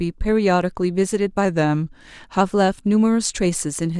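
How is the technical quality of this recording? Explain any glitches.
The recording has one audible glitch. From 1.45 to 2.41 s the speech slows by 5.56% and drops about a semitone (99 cents) before snapping back to normal speed and pitch. This is likely a drift correction step, where clock-matching software changed the playback rate in a single jump to rebalance its buffer.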